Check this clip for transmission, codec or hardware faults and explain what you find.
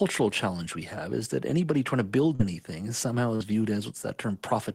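Two transmission faults are audible, both from lost packets on the call path.

From 2.35 to 2.42 s there is a short concealed packet loss. About 40 ms of speech arrived too late or not at all, so the receiver extended the preceding sound for roughly 41 ms before blending back. It is heard as a brief smear.

From 3.35 to 3.43 s a burst of packet loss leaves about 40 ms missing. The decoder continued the last sound for about 46 ms while fading it out, giving a held sound that dies away before the audio resumes further on. The waveform shows a decaying stretch and then an abrupt resumption.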